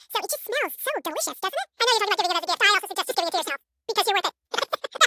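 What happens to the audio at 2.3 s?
At 2.3 s, as everywhere else in the clip, you're hearing a wrong sample rate. The speech runs twice as fast and a full octave higher, chipmunk-like, which fits 16 kHz audio being played back at 32 kHz with no rate conversion.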